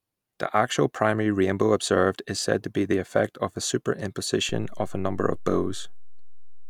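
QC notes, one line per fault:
4.49 s to end, DC step: the waveform's zero line jumps by about −32 dBFS and holds, giving one low thump or click; the waveform shows an offset baseline, the spectrogram a brief low-frequency smear.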